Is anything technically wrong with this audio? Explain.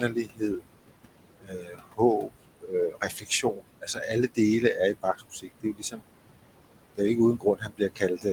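Yes, two related faults come from a noise suppressor working too hard on this speech.

Noise suppressor artifacts run through the whole clip. The suppressor estimates which frequency bands hold steady noise and pulls them down frame by frame, here by about 21 dB. The room noise, sitting about 10 dB below the speech, is therefore pumped: it drops away in the gaps and swells back under the talking.

Speech cut by the noise suppressor happens in seven places: 0.0 to 0.42 s, 1.4 to 2.0 s, 2.49 to 2.73 s, 2.9 to 3.63 s, 3.81 to 4.1 s (just before "dele er i"), 5.02 to 6.01 s (right after "dele er i"), and from 7.4 s to the end, following "det er jo ikke". In these stretches the suppressor mistakes quieter parts of the speech for noise and turns them down with the background, by about 15 to 22 dB at the deepest. In the first six stretches only part of each is affected, a few hundred milliseconds at most. 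Soft consonants and word endings sound swallowed, and quiet phrases fade out.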